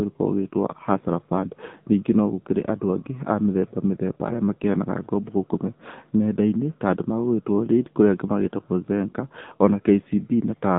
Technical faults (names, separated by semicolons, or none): AMR narrowband mobile codec